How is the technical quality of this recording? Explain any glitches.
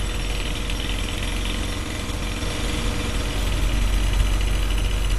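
The technical quality is poor: lossy coding damage runs through the whole recording, and from partway in the sound is doubled.

AAC compression is plainly audible throughout. Nothing reaches above 12 kHz, so the top end is dull, and sustained or hissy sounds take on a smeared, warbling, fizzy texture. The likely cause is AAC-LC coding at a low rate, consistent with around 32 kbps. To save bits the encoder drops the highest band and quantises the remaining spectrum coarsely, leaving gaps or filling them with substitute noise. A simple low-pass filter would also dull the sound but leave no warble. The fizz and smearing within the retained band point to a perceptual codec.

A doubled audio track starts at 2.42 s and lasts to the end. From there a second full-band copy trails the first by roughly 0.7 s at about the same level, so every event is heard twice. This is likely a second capture of the same audio through a slower path, or two out-of-step copies in an edit. 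Unlike an echo or room reverb, the repeat has no decay, no room colour and no further repeats. It is simply a clean duplicate that cuts in abruptly at 2.42 s.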